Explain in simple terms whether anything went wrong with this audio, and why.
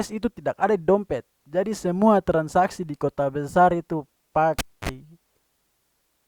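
A live cable was pulled out and plugged back in at about 4.59 seconds. Pulling the plug makes a pop, and the speech then drops to near silence for about a quarter of a second. As the plug goes back in, only its tip touches at first, so a short burst of 50 Hz mains buzz, about 0.04 seconds long, leaks through. A second pop around 4.89 seconds marks the speech returning.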